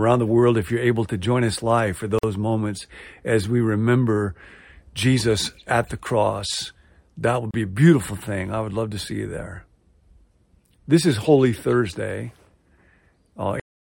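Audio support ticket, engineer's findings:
Gap at a join of encoded pieces, 2.19–2.23 s: about 48 ms of dropout between "join us live for" and "moments as we remember". Speech then resumes exactly where it stopped. Likely encoder priming delay plus last-frame padding left untrimmed at a segment boundary. Spectrogram: narrow vertical blank band, slightly smeared edges.

Same fault at 7.51–7.54 s, about 30 ms, right after "the cross that would". Waveform shows a notch inside continuous speech.

Cut-off end at 13.60 s: audio stops mid-speech and drops straight to digital silence with no decay. Final buffers were never written or played out. Waveform: active signal ends in a hard vertical edge, then a flat line to the end. Spectrogram: all energy terminates abruptly across every frequency band, with no tail or fade.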